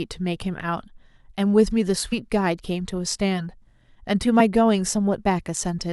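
At 2.12 s the speech jumps forward by about 50 ms, which fits two lost compressed frames of 23.2 ms each. At 4.39 s it jumps again, by about one frame. This is compressed frames skipped. Whole frames were missing or rejected by the decoder, so their audio never plays. The overlap between neighbouring frames blurs each join. Each one sounds like a short smeared blip in the speech, not a sharp click.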